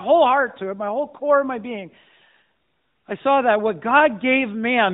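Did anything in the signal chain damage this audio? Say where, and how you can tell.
No: the speech comes over an AMR narrowband mobile codec path at 12.2 kbps, band-limited to 4 kHz with the light coding coloration that mode carries, and no stage in the chain adds damage beyond that.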